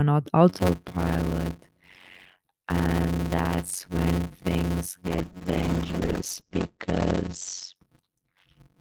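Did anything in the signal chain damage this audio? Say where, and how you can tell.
Yes. From 0.49 s, just before "you're not aware of", to the end, there is a block size mismatch (padded) at the driver or buffer stage. A steady 91.9 Hz buzz sits under the speech, which runs at 0.533 times normal speed with its timbre unchanged. That fits 256-sample writes being zero-padded into larger reads, leaving a gap in every block.

From 5.06 s to 8.07 s there is a call bitrate drop at the network and codec stage. The speech turns rough and muffled, and the top end falls from 20 kHz to 8 kHz, worst for about 1.45 s. This points to the bandwidth estimate falling and Opus being pushed from about 32 to 9 kbps.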